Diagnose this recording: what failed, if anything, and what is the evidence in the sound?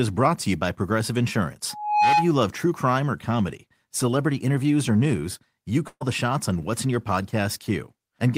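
A pure tone near 841 Hz swells up over about a third of a second from 1.70 s, then squeals on until 2.32 s, sitting roughly 5 dB above the speech. This is loudspeaker feedback squeal in the acoustic path: the microphone picks up its own loudspeaker, and at that one frequency the loop gain exceeds one.

At 5.87 s the speech turns into a held, fading sound lasting about 132 ms, with roughly 50 ms of silence in the gap, and at 6.03 s the speech resumes with about 140 ms missing. This is a burst of packet loss on the network: the receiver extended the last audio and faded it to cover the missing stretch.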